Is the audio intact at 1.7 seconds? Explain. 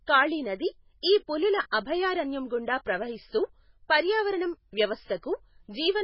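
No. Pre-echo occurs at 1.71 s: the codec spreads quantisation noise across its whole transform block, so noise meant for a sharp onset leaks into the quiet moment before it, heard as a brief hiss of about 18 ms ahead of a softened, smeared attack.

MP3 compression runs through the whole clip, including this moment. The speech has nothing above 5.5 kHz, and weak frequency components flicker from frame to frame, giving a watery, swirly texture and metallic edges on s sounds. The heavy damage likely comes from a very low bitrate, around 16 kbps.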